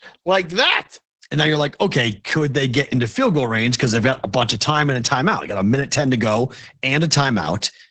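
From start to end, the speech carries Opus voice compression in its SILK linear-prediction mode. Nothing sounds above about 8.5 kHz, a wideband ceiling, and the heavy damage points to a bitrate near 10 kbps, where the excitation is coded coarsely. Voices come out muffled, hoarse and faintly robotic. A plain low-pass filter would only dull the top end. This codec also roughens the texture of the voice itself.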